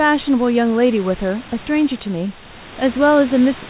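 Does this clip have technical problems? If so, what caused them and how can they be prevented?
No technical faults are audible.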